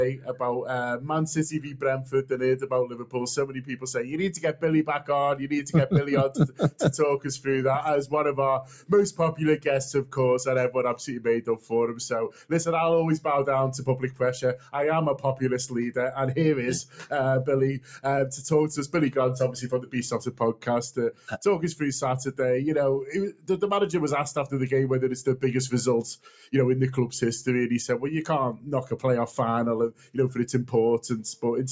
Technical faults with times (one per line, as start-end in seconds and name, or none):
0.00-31.72 noise suppressor applied to music or sounds
0.11-14.73 sound cut by the noise suppressor
16.84-23.49 sound cut by the noise suppressor
26.18-26.50 sound cut by the noise suppressor
28.55-30.73 sound cut by the noise suppressor